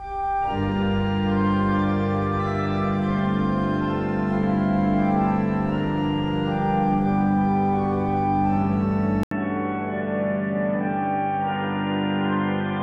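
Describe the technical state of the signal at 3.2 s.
At 3.2 s the signal is intact, with no audible fault at that point.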